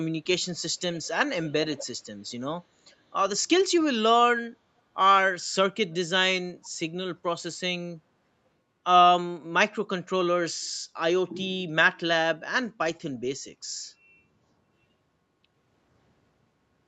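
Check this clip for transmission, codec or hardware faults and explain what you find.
Two faults are audible: an echo leak in the first seven seconds and a brief dip in the background around 8 s.

Echo leak appears at 0.80–1.07 s, 1.46–1.52 s, 1.74–1.87 s, 2.91–2.96 s and 6.64–6.69 s. Each time a copy of the speech returns 437 ms late, in short scraps. It is loudest at 1.74 s, about 15 dB below the speech, and quietest at 2.91 s, about 40 dB below. The likely cause is a far-end loudspeaker whose echo canceller let part of the microphone pickup through and sent it back.

Background gated by the echo canceller occurs at 8.00–8.12 s. The room sound briefly drops by up to about 6 dB for roughly a tenth of a second and then returns. This points to the echo canceller's suppressor pulling the microphone down while it judged loudspeaker playback to be present, then releasing it. The result is a short dip in the ambience, separate from the band limit at 8 kHz that the Opus call path sets.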